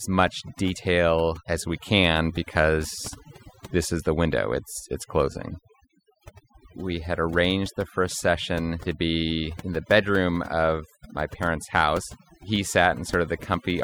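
Overdone noise removal runs through the whole recording, from the first second to the last. A noise reduction process was set too aggressively for the noisy source, so it cuts individual frequency bands deeply, or mutes them entirely, whenever their level sits close to its noise estimate. Quieter components of the speech fall below that line and vanish along with the noise. The background drops and breaks up into twinkling specks.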